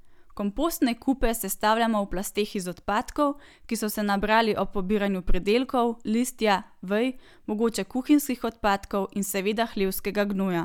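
No technical faults can be heard anywhere in the speech.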